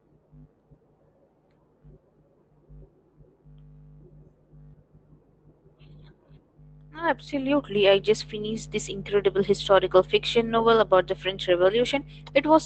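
Speech over a WebRTC call path, band-limited near 8 kHz as fits an Opus link, with no technical fault present.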